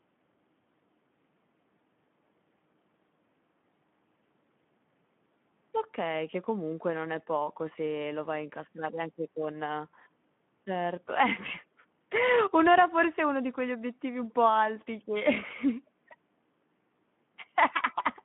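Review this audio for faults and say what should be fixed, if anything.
Throughout, the Speex codec at a low setting, consistent with about 11 kbps, starves the excitation of bits, leaving speech plainly hoarse and noisy between 150 Hz and 3.5 kHz. Prevent this by raising the Speex quality setting or moving to a modern wideband codec such as Opus.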